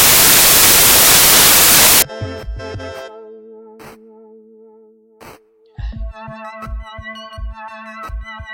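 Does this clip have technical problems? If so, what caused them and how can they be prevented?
Yes. From 0.0 to 2.02 s the music has loud, harsh broadband noise: samples built from the wrong bytes. Misassembled bytes made low bits dominate. Verify byte order and alignment when reading samples.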